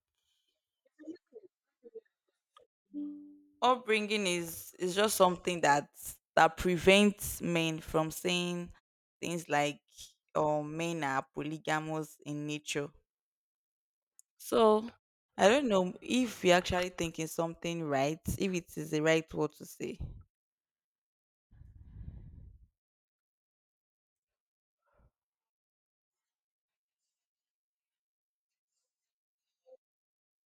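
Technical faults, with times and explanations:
Nothing technical goes wrong anywhere in this speech recording, so there's no fault to list.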